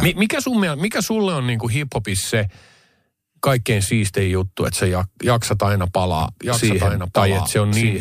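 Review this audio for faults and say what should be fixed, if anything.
Doubled audio track from 6.20 s to the end, starting right after "että sä jaksat aina": a dry, full-band second copy of the speech cuts in abruptly about a second behind and some 5 dB quieter, likely from a slower second capture path mixed back in. Route each source into the mix only once so no duplicate path can reach it.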